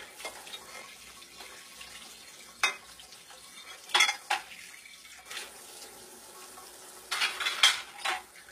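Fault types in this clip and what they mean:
HE-AAC compression: The treble sounds bright but gritty and synthetic, ending at 14.9 kHz. It likely comes from lower bands copied upward, which fits about 20 kbps.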